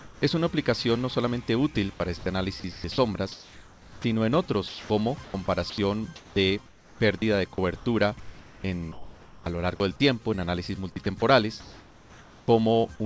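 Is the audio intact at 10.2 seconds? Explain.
Yes, the audio is intact at 10.2 seconds, with nothing disturbing the sound beyond the band limit of the G.722 call path, which carries nothing above 8 kHz.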